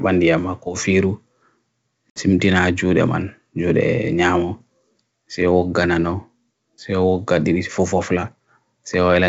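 At about 2.10 s the speech drops into a hard-edged hole of silence, roughly 60 ms of lost audio, which sounds like a few packets going missing in a row. That's packet loss on an ADPCM call: the G.722 stream, running at 64 kbit/s, loses its place, so its predictor and step size no longer match the sender's. When the speech comes back it's a bit distorted, settling by around 2.29 s.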